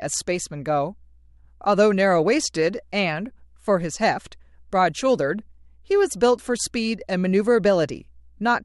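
From the very start of this speech clip to its end, there's a mains hum sitting underneath everything: a steady low tone at 60 Hz, with a few low harmonics stacked above it. It stays well below the talker, somewhere around 35 dB down, so you notice it most in the pauses. That's the power line leaking into the signal, typically through a ground loop somewhere in the chain or from a transformer sitting too close to the cabling or gear.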